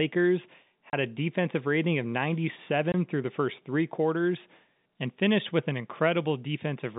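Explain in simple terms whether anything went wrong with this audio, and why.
Packet loss filled with silence: chunks of the audio stream never arrived and were replaced by nothing. This leaves short gaps with hard edges at 0.90 s (30 ms), just before "a defensive rating of", and at 2.92 s (20 ms), before "through the first three".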